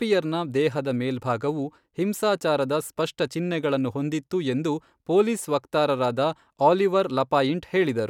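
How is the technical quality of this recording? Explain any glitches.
The recording has no technical glitches to report. Nothing in the speech calls for an explanation as a fault.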